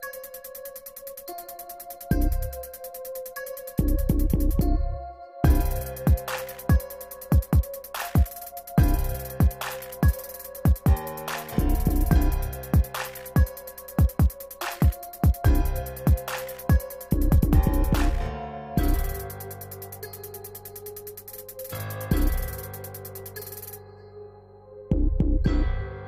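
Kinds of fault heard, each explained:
No technical faults heard.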